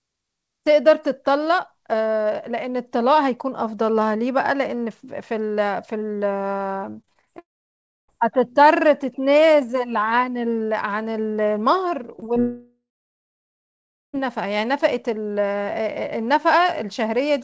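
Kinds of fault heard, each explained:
Repeated packet loss (robotic sound): Packets went missing again and again between 7.02 and 7.28 s. There were five holes, the longest 22 ms. Each was patched by stretching the last sound, so about a third of that span is filler. The speech turns choppy and robotic.
Long network dropout: The speech cuts out from 7.38 to 8.10 s and again from 12.40 to 14.15 s. A brief continuation of the last sound fades into silence lasting about 0.64 s, then about 1.3 s. The likely cause is a network stall. The audio resumes with that stretch lost.
Short concealed packet loss: Three tiny holes of about 20 ms each fall between 12.16 and 12.38 s, just before the second dropout. The receiver filled each one by extending the preceding sound and then blending back. Each is heard as a quick smear or wobble in the speech.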